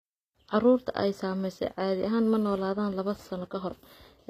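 HE-AAC compression is the likely cause of damage running throughout the speech: nothing sounds above about 14.9 kHz, and s sounds come out gritty and lispy. The treble is synthesised by copying lower bands upward rather than coded, which fits a bitrate near 24 kbps.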